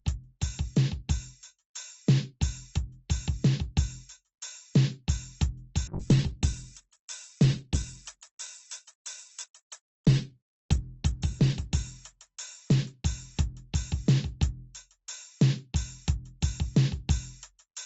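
From 5.88 s to 14.69 s the music suffers a call bitrate drop: the encoder's rate falls from 128 kbps to 13 kbps, holding the floor for about 4 s, so the music turns coarse and watery, losing detail below the call path's existing 8 kHz ceiling.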